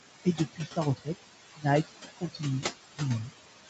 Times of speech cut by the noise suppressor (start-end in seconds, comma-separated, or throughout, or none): 0.25-1.08, 1.56-1.65, 2.16-2.42